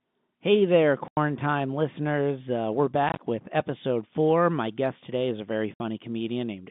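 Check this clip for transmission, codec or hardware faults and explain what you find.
The one real fault here is packet loss filled with silence, heard three times over the G.711 telephone line. The line itself sounds normal for that format, cut off above roughly 3.6 kHz.

From 1.08 to 1.17 s there's a clean 90 ms hole. From 3.09 to 3.19 s, just before "with episode four", 60 ms goes missing in short bursts of up to 20 ms. From 5.74 to 5.80 s there's another 60 ms gap. The receiver dropped in dead silence where the audio should be, so each gap has hard edges. The gap lengths fit 10 ms packets.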